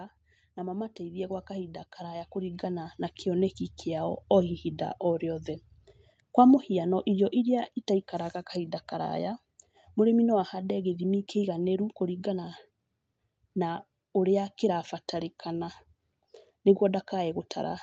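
From 0.55 s to 5.52 s the speech and the room noise behind it swell together, climbing by about 11 dB over roughly five seconds, so the opening is quieter and the level keeps creeping up until it settles. This is automatic gain rising: the call's gain control judged the input too quiet and raised its amplification gradually. Because the extra gain applies to everything, the background lifts right along with the speech. Through the call path, nothing reaches above 8 kHz.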